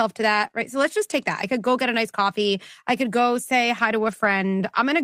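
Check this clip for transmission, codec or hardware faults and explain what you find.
Packet loss affects the speech in two ways. Lost packet rebuilt from error correction: at 0.43–0.45 s and 4.03–4.29 s, the decoder played low-bitrate copies of the missing audio, so there is no gap, but those stretches sound rougher and noisier. Short concealed packet loss: at 0.47–0.51 s and 0.51–0.55 s, audio never arrived and the decoder extended the preceding sound, leaving a brief smear or wobble.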